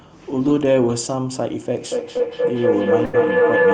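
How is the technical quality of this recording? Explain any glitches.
Quality's rough: a feedback loop takes over the back half, with two dropouts inside it.

From 1.91 s to the end there's feedback howl. Mic and speaker keep re-feeding each other, building a tone near 500 Hz that pulses roughly every fifth of a second and peaks about 4 dB above the speech.

At 2.17 to 2.21 s there's a short concealed packet loss. About 20 ms never arrived, so the decoder stretched the preceding sound over it, leaving a quick smear.

From 3.05 to 3.15 s there's a burst of packet loss. Roughly 80 ms went missing; the receiver held and faded the last sound, then jumped ahead, skipping that stretch.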